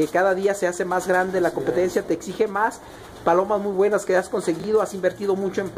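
At 4.60–4.64 s, chunks out of order: one 20 ms chunk plays a chunk late, swapping neighbours into a brief jumbled flick; the waveform shows hard discontinuities, the spectrogram thin vertical lines.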